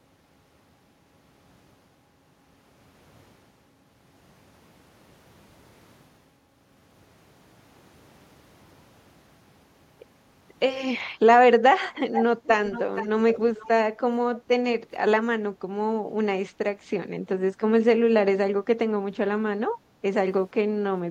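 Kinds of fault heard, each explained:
echo leak: A delayed copy of the speech comes back in short scraps, trailing the original by about 0.47 s. It appears at 12.12, 12.43, 12.70 to 13.08, 13.32 and 13.55 s. The first scrap is strong, only a little below the speech. The later ones are fainter. The likely cause is a far end playing the call on a loudspeaker, where the echo canceller failed to remove all the sound its microphone picked up.
background gated by the echo canceller: The room sound dips briefly and then comes back. This happens at 14.37, 15.51 and 19.77 s. Each dip lasts a tenth to a third of a second and falls by about 8 to 10 dB. Here the echo canceller judged that the loudspeaker was active and turned the microphone down hard. When it released, the background returned.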